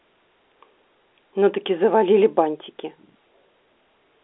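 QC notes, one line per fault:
No faults found: the speech carries the expected sound of a standard telephone line using G.711 A-law coding, with the band running from 300 Hz to 3.5 kHz and nothing above about 3.8 kHz.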